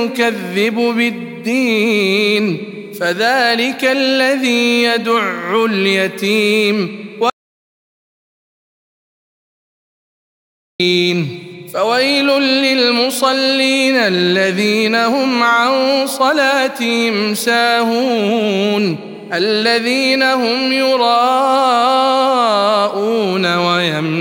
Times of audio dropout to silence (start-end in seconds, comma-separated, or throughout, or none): 7.30-10.80